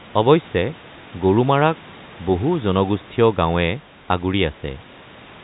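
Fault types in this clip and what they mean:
No faults present in this clip.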